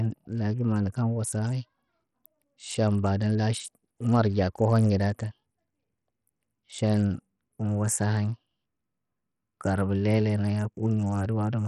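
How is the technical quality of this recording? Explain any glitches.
The recording is coarse throughout. Bluetooth SBC compression, likely at a low bit pool fitting about 64 kbps, starves the top sub-bands. Treble flickers out, nothing above 15.9 kHz, and gritty aliasing clings to the speech, unlike a clean low-pass.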